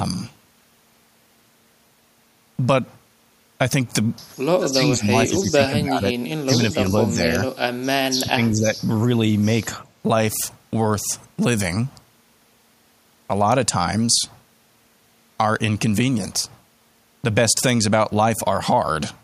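Speech suppressed in double talk at 4.59–6.13, 6.44–7.37 and 8.21–8.71 s: the speech dips by up to about 25 dB, likely from an echo canceller ducking overlapping talk.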